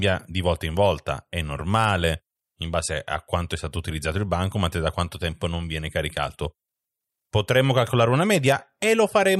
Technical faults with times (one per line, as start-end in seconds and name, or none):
none